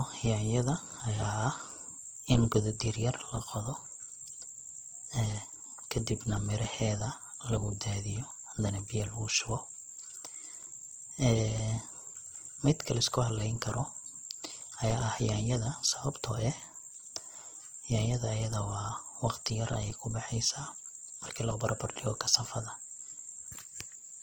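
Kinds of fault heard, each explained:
Transcoding between lossy codecs: the speech has artefacts from two encoders heard together, likely an MP3 pass near 62 kbit/s re-encoded to Opus around 24 kbit/s. The second encoder spends bits on the first one's damage, and nothing sits above 20.1 kHz.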